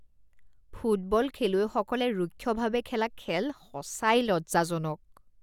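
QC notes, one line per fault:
No faults heard in this speech recording.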